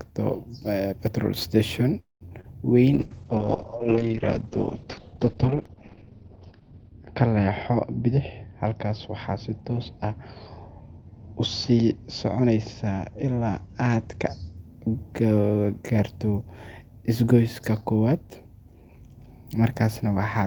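At 1.99 to 2.23 s the speech halts in what is likely a call audio freeze, with delayed packets leaving the jitter buffer empty. The last sound continues as a fading buzz or hiss, then about 150 ms of silence, a flat gap in the waveform, before speech resumes intact but about 213 ms later.

Right after, at 2.29 to 2.33 s and 2.41 to 2.46 s, comes short concealed packet loss. Around 20 ms is missing each time, and the receiver bridges it by extending the previous sound. Each is a brief smear or wobble, visible as a short blurred patch where harmonics lose detail.

From 2.94 to 14.63 s a call bitrate drop takes the encoder from 32 kbps to 7 kbps, lowest for about 4 s. The audio turns rough and muffled. The spectrogram shows the content above 6 kHz cut away, down from a full 20 kHz band.

Within that stretch, a jitter buffer speed-up runs from 7.47 to 8.65 s at 106% speed, and again from 12.37 to 14.43 s at 107%. 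Repeated pitch-period cuts remove around 70 ms and then around 150 ms. Speech sounds hurried at unchanged pitch, with syllables compressed along the time axis.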